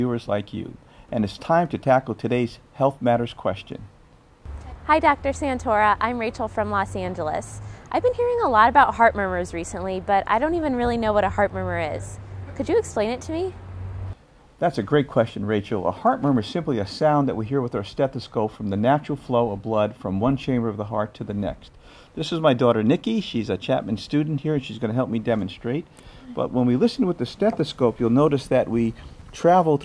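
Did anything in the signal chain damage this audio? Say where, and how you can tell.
No, no stage in the chain has left anything audible on this audio.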